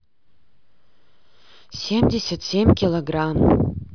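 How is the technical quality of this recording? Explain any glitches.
The technical quality of this recording holds up, with no glitches to explain.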